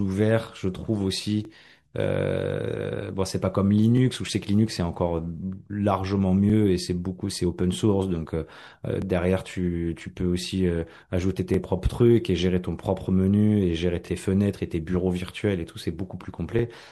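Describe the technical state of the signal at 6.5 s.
At 6.50 to 6.52 s the speech shows an overlapping chunks fault. A join between 2.5 s processing blocks, where the next block begins about 23 ms before the previous one finished, makes that 23 ms slice play twice. It is heard as a brief stutter or click.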